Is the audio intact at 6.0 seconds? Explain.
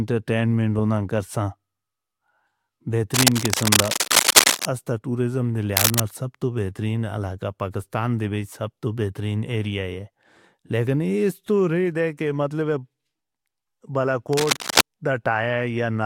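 No. Cable scratch noise runs from 5.77 to 6.00 s, just after "اس تاں ٹوریزم دی". A worn cable or connector was likely being moved, making its contact resistance jump around. Dense, uneven scratching bursts sit a few decibels above the speech.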